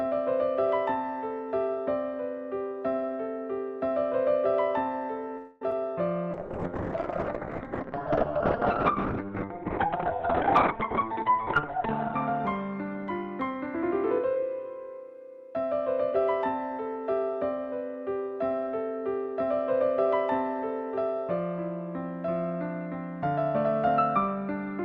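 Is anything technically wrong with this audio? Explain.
Yes, there are four kinds of call-transmission fault.

From 5.37 to 5.62 s the sound stalls into a fading buzz for about a quarter second, then resumes where it left off. This is likely a call audio freeze: delayed packets drained the jitter buffer, so the receiver stretched the last sound and inserted a gap without losing content.

At 5.71 s there is a tiny smear or wobble. This is short concealed packet loss: roughly 10 ms never arrived in time, and the decoder filled the hole by extending the preceding sound before blending back into the real signal.

From 6.34 to 13.9 s the audio turns muffled and rough, with everything above 4 kHz gone. This is a call bitrate drop. Falling bandwidth estimates pushed the Opus encoder from 64 kbps down to 8 kbps, where it stayed for about five seconds and discarded the top of the spectrum.

From 10.40 to 12.30 s, and again from 12.81 to 14.36 s, the sound hurries slightly at unchanged pitch, about 4% then 5% fast. 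This is a jitter buffer speed-up: with too much audio queued, the receiver trimmed short pitch-period chunks repeatedly, cutting around 0.17 s in total.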